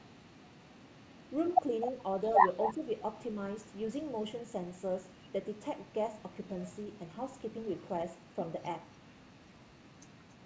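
From 2.63 to 2.74 s a delayed copy of the speech returns about a quarter second late (258 ms), roughly 10 dB below the direct signal. This is likely an echo leak, where a loudspeaker-side echo canceller let residual pickup pass back down the call.

Overlapping it, from 2.69 to 2.83 s, the speech dips by around 10 dB over roughly 150 ms. The likely cause is speech suppressed in double talk, with the canceller attenuating the near talker along with the echo. All of this sits within the G.722 band, which has nothing above 8 kHz.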